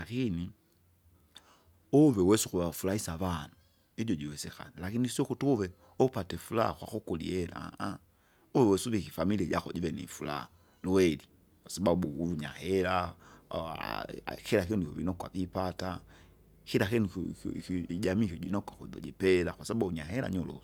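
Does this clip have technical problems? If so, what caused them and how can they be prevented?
No, nothing in this speech recording points to a technical fault that needs a cause traced or a prevention step.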